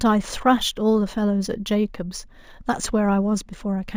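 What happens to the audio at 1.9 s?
At 1.9 s the speech carries imaging from linear upsampling, present across the whole clip. The sound points to a 16 kHz source raised to 48 kHz by straight-line interpolation. Top frequencies are dulled, and a mirrored image at 8 to 16 kHz, about 25 dB down, adds a faint metallic shimmer to sibilants.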